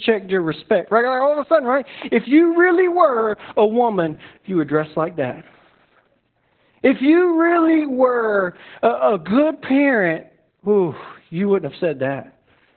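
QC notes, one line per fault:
Throughout, Opus voice compression: everything above about 4.3 kHz is gone, so the speech sounds muffled and telephone-narrow, with a hoarse, slightly robotic edge from coarsely coded excitation. That all points to SILK running narrowband at roughly 8 kbps, which is heavy damage.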